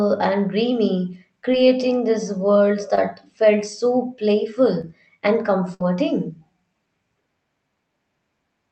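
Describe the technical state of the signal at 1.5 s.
At 1.52 s, just after "and dreamy" and before "these worlds", there is a short concealed packet loss. About 10 ms of the call arrived too late to decode. The receiver extended the preceding sound to cover the gap, then blended back. It is heard as a brief smear or wobble.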